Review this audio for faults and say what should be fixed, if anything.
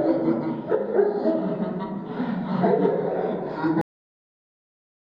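There's a cut-off end at 3.81 s: the sound stops dead mid-event and sits in digital silence through to the end, with no natural decay at all. The final buffers simply never got written out, so everything after that point is missing. To prevent it, flush and close the writer properly, letting the last buffers drain before stopping the recording.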